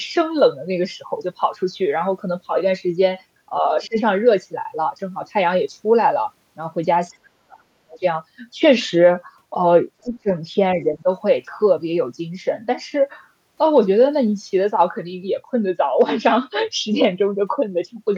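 A speech recording with speech suppressed in double talk at 3.61–3.97 s, 7.21–8.04 s, 10.03–10.30 s and 10.84–11.06 s. The level ducks by about 10 dB in the first and last, about 20 dB at 10.03 s, and nearly 40 dB at 7.21 s, which is close to a cutout. Unlike a network dropout, the dips track overlapping talk rather than landing at random, so the likely cause is an echo canceller muting both voices. The other side's voice leaking through shows up as faint scraps at 3.84–3.88 s and 7.13–7.17 s, about 35 to 40 dB below the talker. A room reflection would repeat the talker, but these scraps are likely a second voice that wasn't fully cancelled from the loudspeaker path.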